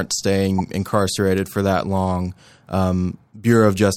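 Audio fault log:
0.58–0.61 s, corrupt frame decoded: just before "incarcerated for that long", a single compressed frame arrives with flipped bits and the decoder plays it anyway, so misread gains and codes put energy at wrong frequencies for that one frame and a short chirp-like burst peaks around -10 dBFS. It lasts a frame rather than the instant of a click, and it adds a foreign tone-noise burst instead of the muffled fill or silence of a lost-frame dropout.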